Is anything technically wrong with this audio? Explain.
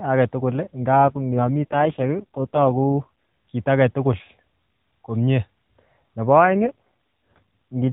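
Yes. There are two AMR rate drops in this narrowband mobile speech, at 0.92 to 3.09 s, ending just before "kit age tugul", and at 6.44 to 7.55 s. The network cut the codec's rate to protect a weak link. The band stays capped at 4 kHz with no gap. The voice turns buzzier and more synthetic, consistent with a drop from 12.2 to 4.75 kbps.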